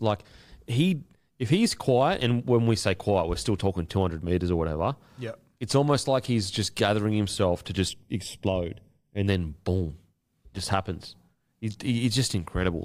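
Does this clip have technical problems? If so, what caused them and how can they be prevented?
Yes. From 7.89 to 9.27 s, after "just gathering himself to" and before "then boom just happens", the speech turns hollow and phasey. This is channel delay (comb filtering): one channel lags roughly 0.4 ms, so summing to mono cancels a first notch near 1.5 kHz and further evenly spaced notches above it. To prevent it, keep both channels sample-aligned, or check mono compatibility before summing.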